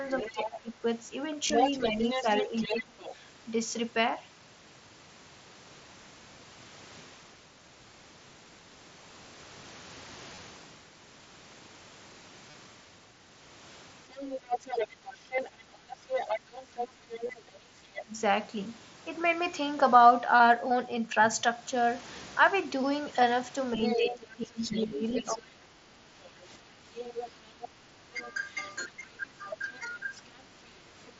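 From 0.06 to 3.15 s the other side's voice leaks through, running roughly 5 dB under the local talker. The likely cause is a loudspeaker echo the canceller failed to remove fully. Overlapping it, from 0.33 to 2.97 s, the talker's speech is suppressed in double talk: the canceller, likely unable to tell its own talker from the echo, pulls the level down by up to about 20 dB in pieces totalling around one and a half seconds, so the voice dips and loses its top end.

At 1.47–1.50 s comes the first concealed Bluetooth headset packet loss, a 22.5 ms gap filled by repeating the last short stretch of waveform, heard as a brief buzzy hold and a small warble as real audio resumes. The same happens at 10.35–10.38 s (22.5 ms), 12.51–12.54 s (30 ms), 15.36 s (15 ms), 17.27–17.29 s (22.5 ms), 24.88–24.91 s (30 ms) and 29.51 s (7.5 ms). The shortest are nearly hidden, and the 30 ms ones fit a run of about four lost frames.

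From 14.04 to 18.15 s double-talk suppression returns, cutting the voice by up to about 25 dB over short stretches of roughly 300 ms in total, while from 14.11 to 17.41 s the far voice again leaks in at about 5 dB below the talker. Between 16.4 and 17.66 s the background is gated by the echo canceller: with the loudspeaker active, the microphone is clamped, so room tone drops by up to about 7 dB for brief moments, around 200 ms altogether, before recovering.

The longest episode runs from 23.75 to 30.13 s, where speech is suppressed in double talk by up to about 15 dB across roughly four seconds in total, with the talker repeatedly ducked and dulled. Leakage of the other side's voice spans 23.83 to 31.1 s, sitting lower this time, about 10 dB under the talker. Throughout, the mSBC headset codec limits the band to 8 kHz with a light grain on loud sounds.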